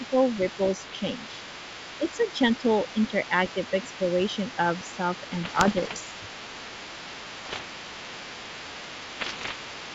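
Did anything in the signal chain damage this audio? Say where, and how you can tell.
Yes. In call processing, the level dips by about 5 dB at 0 to 0.15 s and at 2.13 to 2.19 s, which is likely speech suppressed in double talk by the echo canceller.

The other side's voice is leaking through faintly the whole way, around 20 dB under the talker, likely loudspeaker echo the canceller never fully removed.

On the link, there are bit errors on an ADPCM link as pops and rough bursts at 0.86 to 0.95 s, 5.44 to 5.99 s, 7.40 to 7.61 s and 9.20 to 9.53 s, where flipped bits knocked the decoder's predictor off track.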